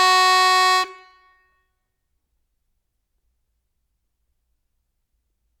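A short music clip, and no technical fault can be heard in it. Nothing in the sound calls for a time or a cause to be pointed out.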